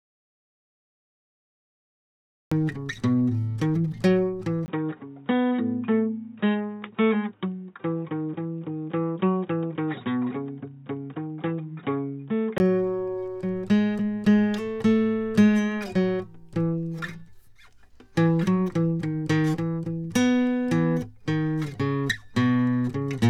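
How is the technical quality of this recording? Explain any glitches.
The recording has two clear faults: the music is missing entirely at the very start, and for about eight seconds in the middle it comes through a noticeably worse input.

Audio dropout to silence, 0.0 to 2.52 s: the clip opens already in a gap of silence, and the music only enters at 2.52 s. The likely cause is a lost input, with the recorder writing silence until the signal returned. Unlike a quiet intro or a fade, there is no room tone or hiss at all, just flat nothing, and then the music starts abruptly mid-flow.

Input switched to a poorer device, 4.66 to 12.6 s: at 4.66 s there is a brief 20 ms blank, then the music turns dull and boxy, with nothing above 3.8 kHz, a drop of about 5 dB in level, and a new background noise floor roughly 45 dB below the music. This likely comes from the system changing to a narrower-band microphone or headset profile. 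What separates it from a simple low-pass filter is that the noise, tone and level all change together at a clean switch point, and full bandwidth returns at 12.6 s.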